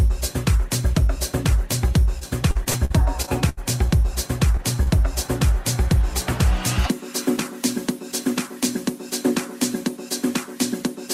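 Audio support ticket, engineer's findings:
Faint regular ticks from 0.35 s to the end, about every 0.4 s, absent where the sound is silent. Clock slip clicks, likely from two free-running device clocks differing by around 50 ppm. Each slip drops or repeats a single sample.

Choppy, robotic stretch, 2.19–3.59 s. Repeated packet loss: the receiver bridges each hole by extending the last sound, with the longest about 78 ms. Roughly a fifth of the span is filler.

Brief smear at 4.57–4.60 s. Short concealed packet loss: about 20 ms never arrived. The decoder continued the prior sound, then blended back.

Second wobble at 4.83–4.88 s. Same mechanism: about 20 ms missing and about 31 ms synthesized before rejoining the real audio.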